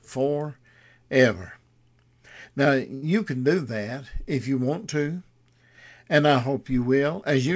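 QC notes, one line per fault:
2.94–3.04 s, short stall from a late packet: just before "can do that if", a late packet emptied the jitter buffer, so the receiver held the last sound for 82 ms, losing nothing but adding 82 ms delay. The spectrogram shows frozen, smeared harmonics, and the waveform shows a repetitive, slightly dipped stretch.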